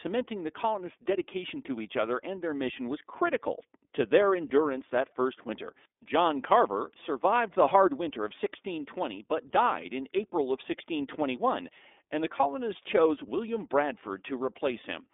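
iLBC codec coding runs through the whole speech recording. The line band is narrow, about 250 Hz to 3.6 kHz, and nothing above 3.7 kHz survives, so sibilants lose their edge and the voice sounds boxed in. Each frame's excitation is coded independently, and the roughness and slightly synthetic grain are plainly audible. The texture points to 30 ms frames, which fits the 13.33 kbps mode.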